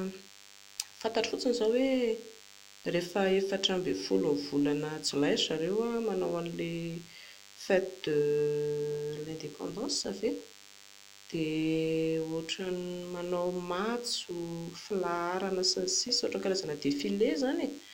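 DECT cordless phone buzz runs through the whole speech clip: a steady, thin 100 Hz buzz rich in harmonics, roughly 25 dB below the speech. A nearby DECT handset or base sends radio bursts every 10 ms, and the audio circuitry rectifies them into audible tone.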